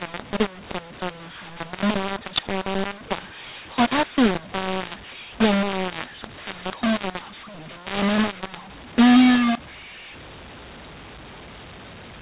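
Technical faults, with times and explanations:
Throughout, mu-law and A-law mixed up: the speech was encoded with the A-law curve but decoded as mu-law, so each 8-bit code goes back through the wrong logarithmic table. Some levels come out inflated and others shrunk, bending the waveform into a harsh, gritty distortion, and the smallest codes land well above zero, filling pauses with hiss. The telephone band limit of 8000 samples a second still holds, with nothing above 4 kHz.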